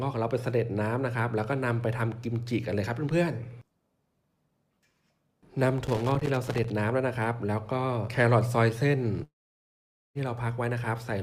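At 1.81 s a single sharp tick, then from 5.86 to 6.70 s an irregular burst of scratching, is loose connector crackle: a worn contact making and breaking, chopping the signal. Its ragged, uneven spacing separates it from the evenly timed clicks of a digital buffer fault.

From 9.23 to 10.18 s the sound smears into a brief fading buzz, then near silence, and resumes with roughly 0.92 s missing. That points to a long network dropout as the likely cause; unlike a mute, the tail decays and nothing lost is replayed.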